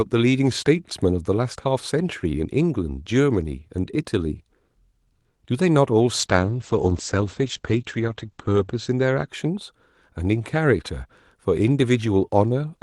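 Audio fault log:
6.2–9.33 s, call bitrate drop: the speech turns rough and watery as the encoder is starved of bits, pointing to a fall from about 40 kbps to roughly 11 kbps. Bandwidth narrows from 12 kHz to 8 kHz, muffling sibilance, with the worst stretch lasting 2.56 s.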